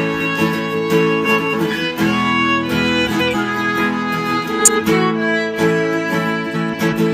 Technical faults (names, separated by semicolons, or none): frames out of order